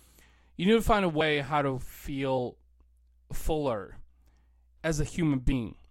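Three brief breaks interrupt this speech clip, each where the audio lurches forward: at 1.2 s, between "need to find a" and "how to"; at 2.37 s, just after "how to"; and from 5.51 to 5.53 s. These are compressed frames skipped. Two or three whole frames went unplayed each time, missing or rejected by the decoder as damaged, so a few tens of milliseconds of sound vanish.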